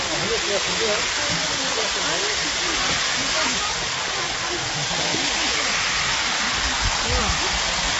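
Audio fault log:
throughout low-delay AAC compression. Coding damage is plainly audible, and nothing remains above 7.7 kHz. This likely comes from short-frame AAC-ELD, fitting a bitrate near 24 kbps.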